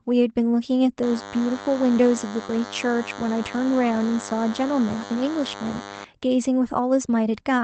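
DECT cordless phone buzz runs from 1.02 to 6.04 s. A nearby DECT handset or base was firing radio bursts 100 times per second, and the audio circuitry rectified them into a thin, steady 100 Hz buzz with a dense stack of harmonics, sitting roughly 15 dB below the speech.

Short concealed packet loss begins at 2.45 s and runs to 2.49 s. About 20 ms of audio never arrived in time, so the decoder extended the preceding sound, from its pitch if voiced or as shaped noise if not, for 21 ms before blending back, leaving a brief smear or wobble.

A lost packet rebuilt from error correction covers 2.47 to 2.49 s. One 20 ms packet was lost, but the next packet carried a low-bitrate Opus in-band copy of it, so the decoder played that 20 ms instead of a gap. It comes through audibly rougher and noisier than the surrounding speech.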